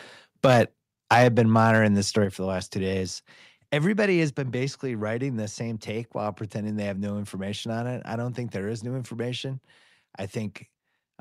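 From 0.44 to 0.61 s and again from 1.11 to 1.79 s, the microphone input was likely set too high, pushing peaks about 8 dB and then about 7 dB past the converter's limit. This microphone overload shaves their tops flat, giving the loudest syllables a harsh, crackling edge.

The microphone volume was also stepped down, likely by the call software cutting input gain in single jumps: at 1.24 s by about 2 dB, at 2.25 s just before "for the last two" by about 5 dB, and at 4.29 s between "two days everybody has" and "been basically writing the" by about 4 dB. Each time, voice and background drop abruptly together.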